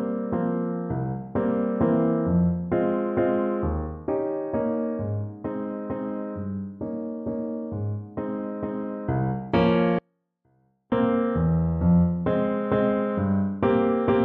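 At 9.99 s an audio dropout to a faint residue begins. The sound cuts abruptly for 0.93 s, leaving only a faint trace about 40 dB down, likely from a break upstream.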